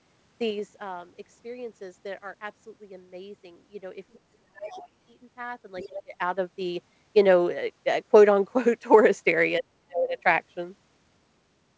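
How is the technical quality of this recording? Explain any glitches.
The recording has three kinds of fault, clustered in the first half and near the end. The call path's band limit is audible as nothing above 8 kHz.

Zipper noise occurs at 0.37 to 0.84 s, as the level falls about 15 dB in 3 dB steps roughly ten times a second. It recurs at 5.57 to 6.78 s, rising about 15 dB at roughly four steps per second. Unsmoothed gain jumps tick audibly.

Speech suppressed in double talk shows as dips at 4.33 to 4.81 s and 6.04 to 6.14 s of about 25 dB, and about 40 dB at 9.58 to 10.18 s. The likely cause is an echo canceller ducking everything during overlapping talk. These are drops in the talker's voice, not stepped ticks.

The other side's voice leaking through appears at 4.61 to 4.89 s and 5.78 to 6.02 s. A second, quieter voice sits about 15 dB below the talker, likely loudspeaker echo the canceller missed. 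It is added sound rather than lost sound.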